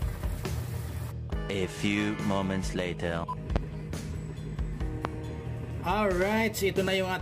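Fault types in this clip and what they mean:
Loud pop: sharp pops at 3.56–3.59 s and 5.05–5.08 s, far louder than the sound, which continues unbroken beneath; likely a switch or static voltage spike.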